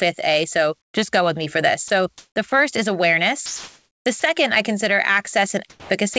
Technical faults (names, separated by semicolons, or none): comfort noise in place of the background; sound dropped by the voice detector; sound chopped by the voice detector